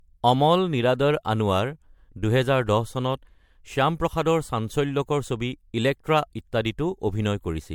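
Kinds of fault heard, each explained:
Generation loss: swirly, hollow, smeared speech with blurred attacks and nothing above 19.9 kHz, likely from errors stacked over about five MP3 encodes near 96 kbit/s.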